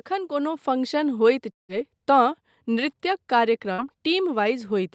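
From 0.08 to 1.14 s the level climbs by about 4 dB as automatic gain rises. The control judged the input too quiet and raised its gain gradually, so speech and background swell together. On a waveform the envelope widens steadily. A spectrogram brightens evenly across all frequencies, which in this clip stop near 8 kHz because of the call path.

Between 1.51 and 1.72 s the sound breaks off. The last sound is stretched into a fading buzz or hiss, then near-silence follows until speech resumes further along, about 180 ms having gone missing. The likely cause is a long network dropout. A waveform shows a decaying smear then a flat line. A spectrogram shows a blurred, collapsing smear followed by an empty band.

At 3.73 to 3.81 s a burst of packet loss removes about 60 ms. The receiver repeats the final sound as a brief held sound that quickly fades, then jumps ahead. The waveform shows a short shrinking repetitive segment. 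The spectrogram shows a frozen, fading pattern ending in a sharp resumption.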